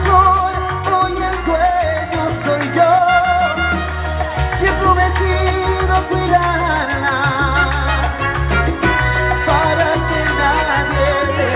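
No technical faults are audible.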